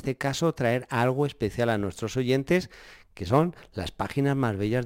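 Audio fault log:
Throughout: sample clock jitter. The converter clock wobbles by a few microseconds, so there's a faint roughness that builds on loud, bright speech and disappears in the gaps.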